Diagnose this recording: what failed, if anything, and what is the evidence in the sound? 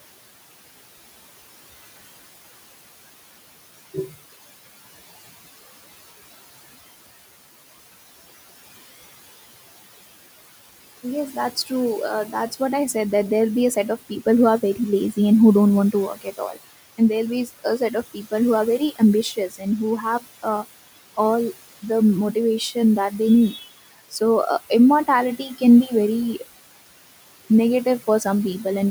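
Call processing failed: the noise suppressor cuts the steady room noise by about 16 dB frame by frame, so the background pumps between phrases.

In the same stage, speech was cut by the noise suppressor. The suppressor mistook quieter speech for noise at 16.15–16.57 s after "who don't want to", at 17.46–18.33 s before "who are", and at 19.23–19.66 s. Brief stretches in each span drop by about 10 to 16 dB and sound swallowed.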